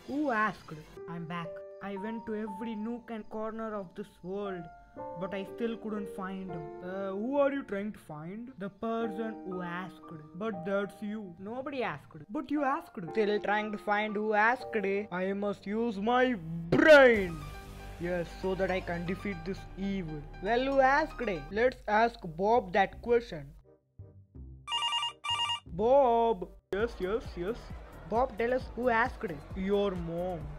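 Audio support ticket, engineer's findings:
Damaged data in a compressed stream: short glitches at 1.0 s, 3.21–3.23 s, 6.53 s and 25.24 s. The decoder misreads corrupt frames and resyncs on the next header. Spectrogram shows brief broadband smears; waveform shows abrupt discontinuities.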